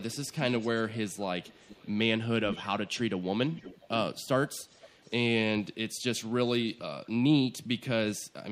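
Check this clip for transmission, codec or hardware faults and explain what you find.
An echo leak recurs through the speech at 0.11–1.91 s, 2.50–2.67 s, 3.55–4.23 s, 4.59–5.11 s and 7.04–7.08 s. A copy of the voice returns about half a second late, faint in most places but nearly as loud as the speech around 2.5 s. This likely comes from a far-end loudspeaker whose echo canceller let part of the microphone pickup through.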